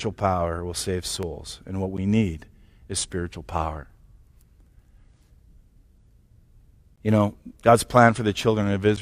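From 1.23 s to 8.40 s the speech picks up a regular tick every 1.79 s, roughly five in all. That's the signature of clock drift buffer slips, likely from two devices disagreeing by something like 400 ppm, with a few dozen samples dropped or repeated at each slip.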